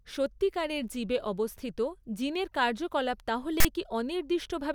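A harsh, loud rasp cuts into this speech recording from 3.60 to 3.65 s, right after "অবস্থিত জিনের কার্যকলাপ তাহলে", starting and stopping with hard edges and leaning to one side of the waveform rather than centring on zero. That lopsided burst of static is the mark of file tags played as audio: a block of text metadata was decoded as sample data, and the character bytes produced a buzzy, offset noise lasting about 45 ms.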